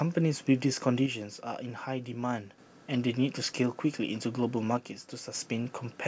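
Speech with one channel dropping out from 1.06 to 2.58 s and 4.77 to 5.35 s, likely a lost stereo channel, shown as abrupt waveform steps about 6 dB lower.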